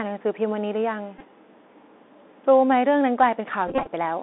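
Speech carried over a Bluetooth CVSD headset codec. On a spectrogram the energy sits in a band from about 250 Hz to a hard ceiling near 3.6 kHz, with nothing above it. The step-adapting one-bit coding, which fits a 64 kbps link, leaves plainly audible damage: scratchy sibilants, strained loud peaks and a granular hiss under the speech. A Bluetooth headset packet repeated fault breaks in twice. From 1.19 to 1.23 s, about 19 ms is lost, which fits five lost packets, each replaced by a replay of the last good one. From 3.68 to 3.87 s the losses come in scattered bursts, about 113 ms in total across roughly 190 ms, with the longest run around 30 ms. In those runs the waveform shows the same short 3.75 ms segment copied end to end, and the spectrogram shows evenly spaced harmonic lines heard as a buzz near 267 Hz.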